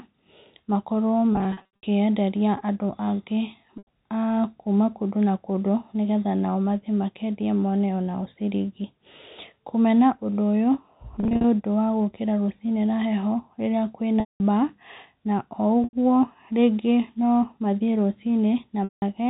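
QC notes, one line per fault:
1.33–1.83 s, 3.78–3.87 s, 11.20–11.44 s, 14.20–14.40 s, 15.84–15.93 s, 18.84–19.02 s, packet loss with pitch repetition: a held, buzzy tone that fades to brief silence in the longer gaps, up to 200 ms at 14.2 s. Missing audio was bridged by repeating the last pitch period and fading it out. The gaps at 1.33 s and 11.2 s are scattered dropouts.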